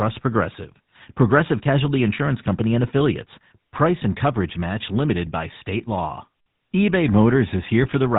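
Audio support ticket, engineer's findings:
GSM full-rate codec, whole clip. Buzzy, gravelly speech with nothing above 4 kHz. Pulse-driven vocal-tract model keeps only a thinned excitation, so harmonics turn rough. Damage plainly audible. Fits the 13 kbps GSM full-rate codec.

GSM bit errors, 7.83 to 7.90 s. Brief squawk and gargle at the end of the clip. Corrupted filter, pitch or gain values in the decoder distort the spectrum and level. The span points to about three damaged 20 ms frames.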